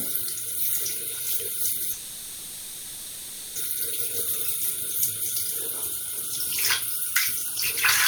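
From 1.93 to 3.58 s there is a call audio freeze. The last sound is stretched into a fading buzz or hiss for about 1.6 s, likely because delayed packets emptied the jitter buffer. Nothing is lost, and the sound then resumes 1.6 s late. A spectrogram shows smeared horizontal bands and the waveform a decaying, repetitive envelope.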